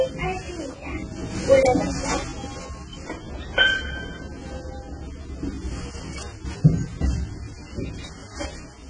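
The sound carries AAC compression damage throughout, likely from AAC-LC at a very low bitrate. Nothing sits above 10.4 kHz, and the heavy quantisation leaves the audio dull and smeared, with a warbly, fizzy texture that fits roughly 16 kbps.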